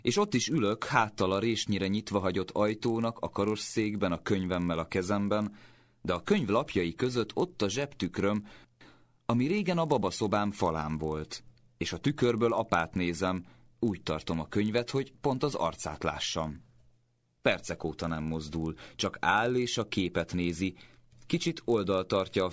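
Resampler restarted on every block, throughout the speech: each 20 ms block was converted separately, likely from 44.1 kHz down to 16 kHz, so every block edge carries a small error, heard as a 50 Hz buzz that rides on the speech and falls away in silences.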